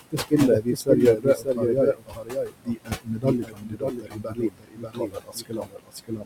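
A doubled audio track runs through the whole clip. A second full-band copy of the speech trails about half a second behind, only a few dB quieter. It has no reverb or room colour. It likely comes from a second, slower capture path.

Noise suppressor artifacts are also present throughout. The room noise sits about 13 dB below the speech. The suppressor pulls it down by about 20 dB between phrases and lets it back up under speech.

Speech cut by the noise suppressor first appears from 0.12 to 0.33 s. About a tenth of a second of speech drops by up to about 18 dB. From 0.6 s to the end, roughly four seconds in total are turned down by up to about 22 dB. Quiet consonants and word endings sound swallowed.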